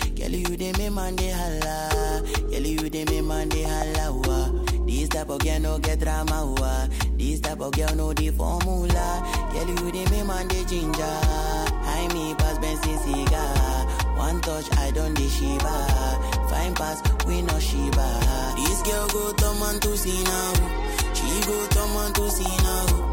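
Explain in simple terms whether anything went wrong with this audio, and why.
From 18.50 s to the end, pre-emphasis was left on: a CD-style treble boost was never undone, so the sound turns thin, bright and hissy-edged, unlike muffling or added noise.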